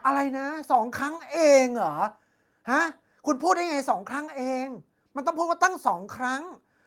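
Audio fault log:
2.04 s, microphone volume stepped down: level drops suddenly by about 2 dB, likely the call software lowering the input volume in one step.
5.63–5.88 s, microphone overload: peaks turn harsh and crackly, pushed about 3 dB past the converter limit, likely because input volume was set too high.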